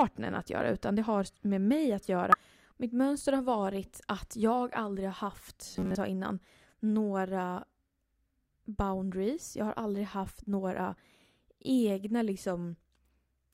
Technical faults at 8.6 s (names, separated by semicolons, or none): damaged data in a compressed stream